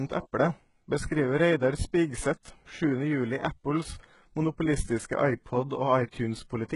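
Throughout, the s sounds turn gritty and lispy and the treble sounds synthetic, stopping near 11.1 kHz. This is likely heavy HE-AAC compression, consistent with roughly 12 kbps.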